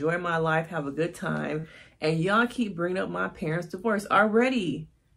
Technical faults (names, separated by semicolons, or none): short concealed packet loss